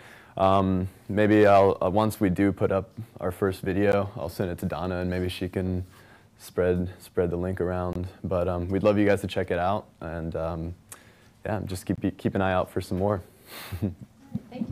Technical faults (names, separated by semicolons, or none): gap at a join of encoded pieces